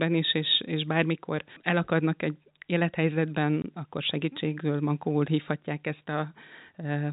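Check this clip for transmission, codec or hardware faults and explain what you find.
One transmission fault is audible: packet loss filled with silence, heard against a G.711 telephone band that cuts everything above 4 kHz.

From 3.62 to 3.64 s, just before "akkor segítségül mankóul hívhatják", the signal drops out for 20 ms, which fits a single lost packet. The receiver played silence in its place, so the sound stops abruptly and restarts with hard edges.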